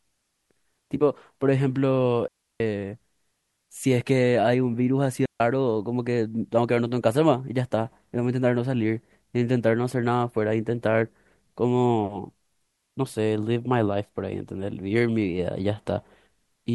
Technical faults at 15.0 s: none

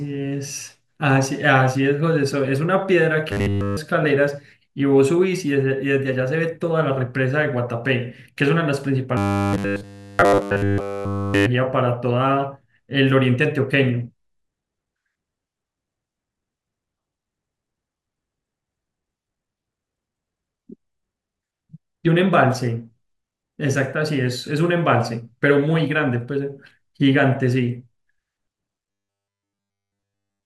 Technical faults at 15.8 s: none

